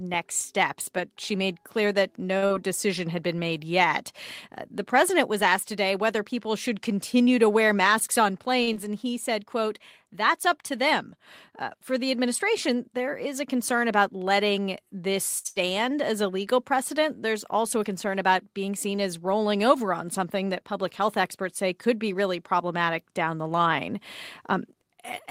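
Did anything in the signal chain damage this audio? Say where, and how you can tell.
Yes, the damage happens at the network and jitter-buffer stage of a packetised call, in four forms.

A short stall from a late packet occurs at 8.63 to 8.69 s and again at 15.38 to 15.47 s, just after "concern about letting this". In each case the sound is held on for about 43 ms and 63 ms respectively, with a slight buzz or dip, and then carries on from exactly where it stopped. Nothing is skipped. The receiver simply waited out a late packet by stretching what it had, so the delay grows by the length of the hold. That is what separates it from a loss.

Short concealed packet loss follows at 8.73 to 8.76 s. It is a brief smear rather than a hold: about 20 ms of audio never arrived, and roughly 14 ms of synthesised continuation was blended in over the gap. Unlike the stall just before it, the audio resumes slightly further along. 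So a tiny piece is genuinely gone, the way a brief consonant can drop out, instead of everything being pushed later.

A burst of packet loss sits at 15.49 to 15.58 s, between "concern about letting this" and "as a legal precedent", right after the second stall. Roughly 80 ms went missing. The receiver filled about 73 ms by extending the last sound and letting it fade. When real audio returns, the material from the gap is absent. The size of the hole and the fading fill mark it as several lost packets, not one small concealment.

Jitter buffer speed-up runs from 22.07 to 24.97 s, starting after "health experts say could". The sound plays at about 102% speed with unchanged pitch, a change too small to sound hurried. That points to many tiny pitch-period cuts totalling around 70 ms, which drain excess delay held in the buffer. The constant pitch rules out a clock or sample-rate error, which would shift pitch along with tempo.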